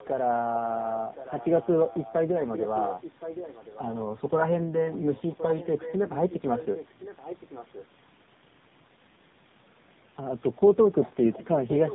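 Tandem speech coding runs through the whole recording. The speech seems to have been decoded and re-encoded at each network border, passing through two speech codecs in a row. The sound fits a GSM full-rate stage followed by AMR-NB at about 7.95 kbit/s, with a G.711 link in between. Each coder works on the previous one's damaged output, so the speech comes out rougher, duller and more warbly than a single codec would leave it. Nothing is left above 3.8 kHz.

An echo leak starts at 11.31 s and lasts until the clip ends at about 12 s. A delayed copy of the speech arrives about 1.07 s after the original, roughly 10 dB below it. The likely cause is a loudspeaker on one side of the call, whose echo canceller failed to remove everything its microphone picked up and sent the remainder back into the call.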